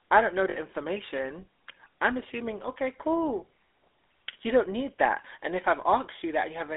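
The speech runs through the GSM full-rate codec, which rebuilds each stretch of the voice from a vocal-tract model excited by a sparse, evenly spaced pulse train, at a rate that points to the 13 kbps full-rate coder. The result is a plainly audible buzzy, gravelly grain on every syllable, with the sound confined to a telephone band of about 300 Hz to 3.6 kHz, so the low body and the upper sibilance are both missing. Lost GSM frames occur from 0.50 to 0.58 s, between "I don't know" and "information I'm assuming okay". The decoder covered the gap by reusing the last good frame's parameters, and the length of the dropout fits about three 20 ms frames. Instead of a clean gap, the voice freezes into a short, rough, metallic ring before normal speech resumes.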